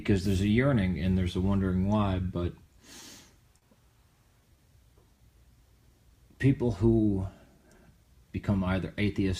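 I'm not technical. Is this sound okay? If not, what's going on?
No. The sound has three related timing problems, all caused by audio arriving unevenly over a network connection.

First, there are two short stalls from a late packet, at 3.00 to 3.04 s and at 3.58 to 3.64 s. Each time, a small chunk of audio arrived late. The playback had nothing new to play, so it held the last bit of sound a little longer. The first hold lasts 20 ms and the second 40 ms. Nothing is lost. You may hear a brief stretched moment, with a faint buzz or dip.

Second, there is a jitter buffer slow-down from 4.28 to 5.18 s. The jitter buffer is a small store of audio that smooths out uneven arrival. Here it was running low, or had just been set to hold more. To refill it, the player repeated tiny slices of sound over and over. This adds 61 ms in total. The sound plays at 94% speed but keeps the same pitch. It can seem slightly drawn out or wobbly.

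Third, there is a jitter buffer speed-up from 7.58 to 8.51 s. This time the store had too much audio waiting. To catch up, the player quietly cut out tiny slices, about 50 ms in total. The sound runs at 104% speed, still at the same pitch.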